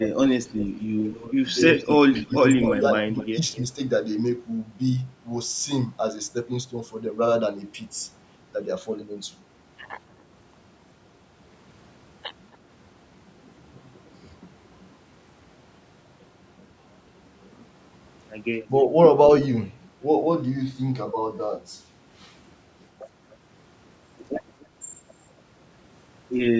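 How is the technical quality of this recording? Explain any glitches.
The recording is a call with two recurring faults: echo leaking back from the far end, and the talker being pulled down while both sides speak. The content stops at 8 kHz, which fits the bandwidth of the call path.

Echo leak appears at 0.0–0.08 s, 0.45–0.65 s, 1.75–3.62 s, 12.53–12.57 s and 24.6–24.66 s. A delayed copy of the voice returns about 254–283 ms late, likely because a loudspeaker-side echo canceller left residue that was sent back. The first and third instances are strongest, about 10 dB below the speech, a trailing double. The 0.45 s one sits about 20 dB down. The late scraps are faint, about 35–40 dB down.

Speech suppressed in double talk occurs at 1.09–1.35 s and 1.98–2.43 s, the second overlapping the early echo activity. The talker's level dips by roughly 10 dB in the first case and roughly 15 dB in the second, totalling a few hundred milliseconds. 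The likely cause is an echo canceller that could not separate the local voice from loudspeaker pickup during simultaneous talk, so it attenuated everything, leaving brief dips in the voice.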